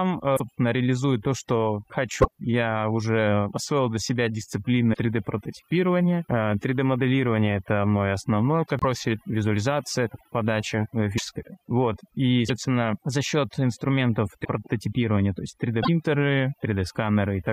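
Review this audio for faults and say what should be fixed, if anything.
Overdone noise removal runs through the whole speech clip: bands near the noise estimate are cut away, leaving twinkling specks in near-silence. The specks that come and go set it apart from simple low-pass dullness.

Broken MP3 bit reservoir: short chirps or holes at 0.35–0.41 s (just before "реализую то что"), 2.21–2.28, 4.93–4.98, 8.79–8.85 (after "это мой основной как"), 11.17–11.20 (after "это подача"), 12.48–12.50, 14.43–14.48 and 15.82–15.89 s. These are likely caused by dropped frames, so the next frame decodes with another frame's borrowed bytes. Unlike plain dropouts, each event garbles and skips ahead, and the spans fit roughly one to three 26 ms frames.

To prevent these faults, ease the noise reduction strength, and cut or stream MP3 only at frame boundaries or re-encode from the source.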